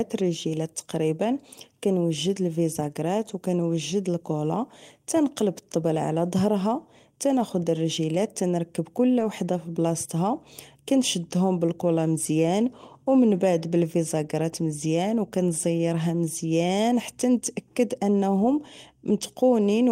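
Between 9.19 and 9.25 s, after "ناخد رجيلات نركب كل" and before "في بلاصتها كنشدو بالكولا", there is a lost packet rebuilt from error correction. Some data went missing, but the following packets carried low-bitrate backup copies, and the decoder played those instead. There is no gap. For about 40 ms the speech turns rougher and noisier. That span fits two separate 20 ms packets rebuilt this way.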